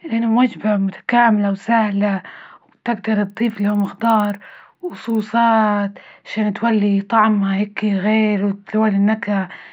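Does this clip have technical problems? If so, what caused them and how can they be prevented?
Yes. A resampler restarted on every block, 3.25–5.2 s, ticks at 20 Hz: each 50 ms block was converted from 24 kHz to 48 kHz without neighbouring samples, leaving an error at every edge. Prevent it by carrying resampler state across blocks.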